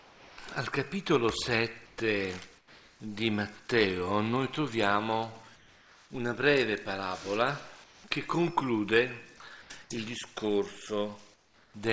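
Comfort noise in place of the background fills the gaps at 0.0–0.38, 1.86–1.98, 2.58–3.0, 5.56–6.1, 7.84–8.04, 9.62–9.7 and 11.34–11.74 s, likely from discontinuous transmission. Steady, featureless noise about 3 to 6 dB quieter replaces the real background, showing as flat, textureless spectrogram patches.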